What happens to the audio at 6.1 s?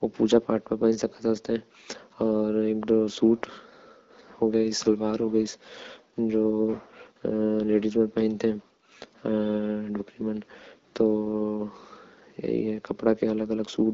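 Nothing goes wrong at 6.1 s: the speech stays intact there, carried by the AMR wideband (HD Voice) codec at 12.65 kbit/s with only light coding colour.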